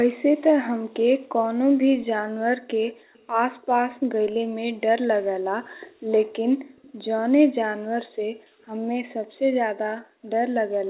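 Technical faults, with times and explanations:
3.14–3.27 s and 6.77–6.93 s, echo leak: a very faint copy of the sound returns about 0.21 s later, likely loudspeaker pickup that the far end's echo canceller left in.
10.03–10.25 s, background gated by the echo canceller: room sound drops by about 38 dB for roughly a fifth of a second while the canceller suppresses the microphone, then recovers.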